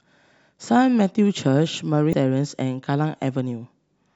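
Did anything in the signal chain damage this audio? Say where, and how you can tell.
Yes, damaged data in the compressed stream, codec stage: corrupted frames at 2.10 to 2.13 s throw the decoder out of sync, leaving a brief glitch.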